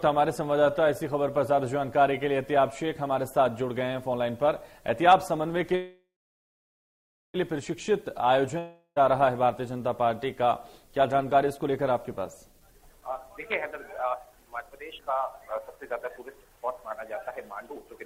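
The audio has three kinds of fault. From 5.75 to 7.36 s there is a call audio freeze, likely from packets held up in transit until the jitter buffer ran dry. The last sound is stretched into a fading buzz that then sits silent for about 1.28 s. On a waveform this looks like a decaying tail followed by a flat line. Playback then resumes where it stopped, so nothing is lost, but everything after it runs 1.59 s later. From 8.59 to 9.01 s a long network dropout, likely lost packets, replaces about 0.38 s of audio. A fading concealment tail ends in roughly 80 ms of silence, and the audio then jumps ahead with that stretch missing. A spectrogram shows this as a smeared, dimming band, a short blank, and then an abrupt restart. Jitter buffer speed-up appears from 12.52 to 13.38 s at 127% speed, removing about a fifth of a second. It appears again from 13.99 to 17.99 s at 119% speed, removing roughly 0.7 s. 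Short pitch-period slices are cut out repeatedly, so the audio sounds hurried at an unchanged pitch. On a spectrogram the pitch harmonics stay level while events crowd closer together in time.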